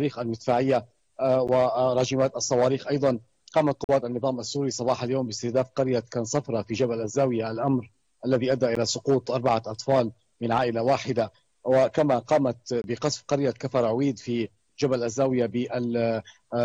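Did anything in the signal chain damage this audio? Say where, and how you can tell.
Yes: the driver or buffer stage missed its deadline, leaving a block of digital silence at 1.47, 3.84–3.89, 8.75 and 12.82–12.84 s. The gap lengths fit 512- to 2048-sample buffers.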